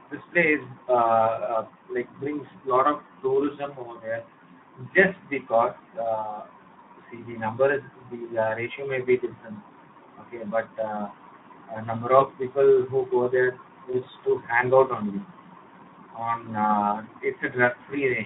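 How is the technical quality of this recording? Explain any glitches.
Technical quality is limited by plainly audible low-bitrate coding throughout, plus two brief dropouts.

Speex codec, throughout: band-limited to 150 Hz to 3.7 kHz, with hoarse, noisy coding damage that fits a setting around 11 kbps, leaving little detail for the excitation.

VoIP packet loss concealed by the speech codec, at 12.19–12.23 s and 13.91–13.97 s: each time, about 20 ms of audio went missing. The decoder extrapolated from the previous pitch and filter, giving a fading patch with weakened sound until it recovered.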